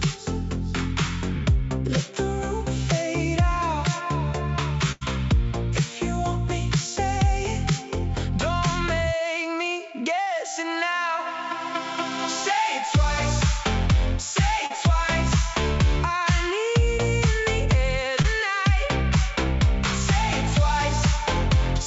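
Audio carried over a WebRTC call path, band-limited with nothing above 8 kHz, which fits G.722 at around 64 kbps. A burst of packet loss at 4.92–5.03 s replaces roughly 80 ms of audio with about 90 ms of the previous sound held and faded, before playback resumes further on. Short concealed packet loss appears at 10.22–10.28 s, 14.66–14.72 s and 18.22–18.26 s, where 40, 40 and 20 ms are filled by extrapolated sound and then blended back, producing brief smears or wobbles.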